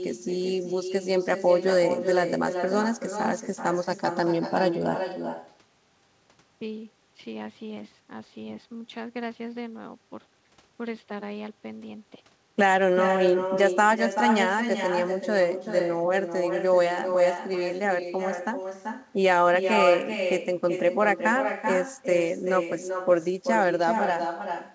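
No echo canceller removes the far end's loudspeaker pickup, so throughout the speech each phrase returns roughly 0.4 s later, about 7 dB quieter and thinner.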